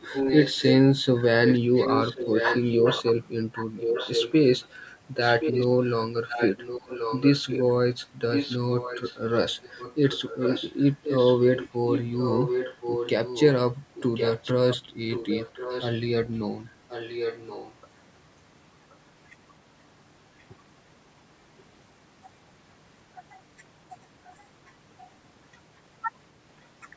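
Speech from a call, with an echo leak: a second copy of the speech arrives about 1.08 s late, strong from 0.0 to 7.64 s, weaker from 8.31 to 17.75 s, and only a faint trace at 24.24 s. The likely cause is a far-end speakerphone whose echo canceller let part of its loudspeaker output back in. On a spectrogram, each burst reappears shifted right by that delay beneath the band edge at 8 kHz, and on the waveform, delayed envelopes overlap.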